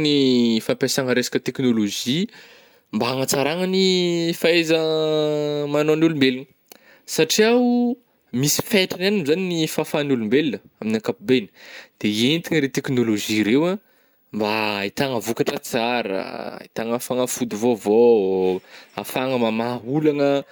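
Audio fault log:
Listening to the speech, nothing stood out as wrong at any point.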